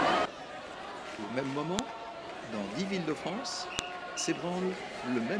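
Two sharp, loud clicks at 1.79 s and 3.79 s, exactly 2.0 s apart, are a file header played as audio. Each 2-second piece was joined without stripping its header, so those few dozen bytes play as a burst of arbitrary sample values. Unlike a splice discontinuity or a dropout, the snap has no gap or muting around it, lands on a fixed 2-second grid, and is just as loud whatever the audio is doing at that moment.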